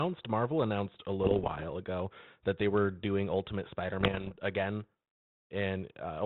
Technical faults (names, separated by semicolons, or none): bit errors on an ADPCM link